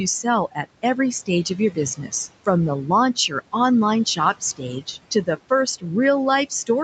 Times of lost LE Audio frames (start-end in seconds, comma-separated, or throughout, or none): none